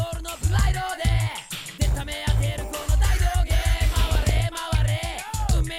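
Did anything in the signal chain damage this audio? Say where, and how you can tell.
Yes, there's DAB burbling in two stretches, from 1.31 to 1.52 s and again from 4.00 to 4.56 s, and both come from the codec stage on the broadcast link. You hear short noise blips over the programme as single sub-bands are hit and jump in level. That points to weak reception. A bit error rate of around half a percent is getting past error correction and corrupting the MP2 samples and scale factors, and the second, longer burst spans a couple of dozen frames.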